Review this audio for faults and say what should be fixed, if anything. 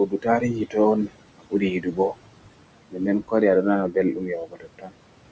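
Noise suppressor artifacts run through the whole clip. The suppressor pulls the room noise, which sits about 14 dB below the speech, down by about 21 dB between phrases and lets it back up under them, so the background pumps. Capping the reduction at a gentler depth and smoothing the gain over time would prevent this.

Speech cut by the noise suppressor occurs at 0.06–0.78 s, 1.38–1.63 s, 1.81–2.17 s, 2.91–3.01 s and 4.13–4.95 s, the last right after "waɗi a ɗo nana". The suppressor judged quiet parts of the speech to be noise and dropped them by up to about 22 dB, so those stretches sound swallowed. A voice-activity check that holds the gain up while speech is present would keep these parts intact.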